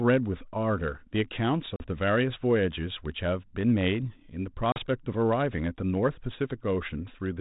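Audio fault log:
1.76 s and 4.72 s, packet loss on an ADPCM call: a sharp-edged hole of about 40 ms, a couple of packets, goes silent. Speech then returns with brief distortion as the decoder's predictor and step size resynchronise. That recovery, not a plain dropout, marks it.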